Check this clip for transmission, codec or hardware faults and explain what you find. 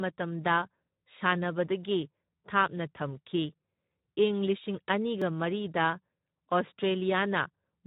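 Two faults: a codec problem that runs the whole way through, and one tiny dropout.

Speex codec damage is there from start to finish. The CELP coder is starved of excitation bits, so the speech comes out noisy and hoarse. Nothing sits above 3.8 kHz, and the overall quality points to a setting around 11 kbps.

At 5.22 s there's a block of digital silence, only about 1.45 ms long, which fits a 64-sample buffer that wasn't filled in time. The audio drops straight to silence and straight back, so you hear it as a tick or dip.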